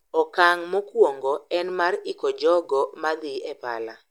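No technical faults are audible anywhere in this recording.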